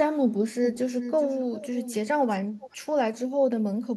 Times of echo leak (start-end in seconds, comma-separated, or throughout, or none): 0.64-1.95, 2.59-2.77